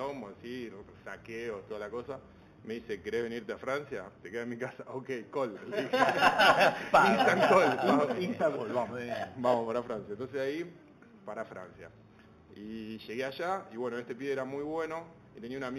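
Throughout the clip there is imaging from linear upsampling. The audio band stops near 4 kHz, which fits an original rate of 8 kHz raised to 44.1 kHz. Straight-line interpolation between the original samples filters poorly, so it softens the top of the band and leaves a mirrored copy of the spectrum between 4 and 8 kHz, roughly 25 dB below the signal. That copy is heard as a faint metallic shimmer on bright, high-frequency content.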